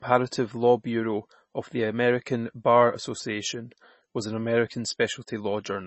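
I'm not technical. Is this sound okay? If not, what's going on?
No. Throughout the speech there is a watery, swirly quality, with s sounds turning thin and chirpy and nothing above 8 kHz, so it sounds dull and muffled. The likely cause is heavy MP3 compression, which drops treble and faint detail to save space.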